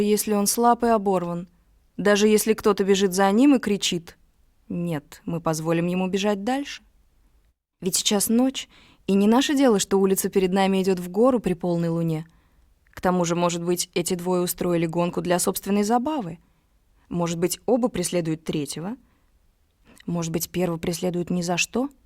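No glitches or dropouts turn up anywhere in this recording; it just runs along with nothing breaking in.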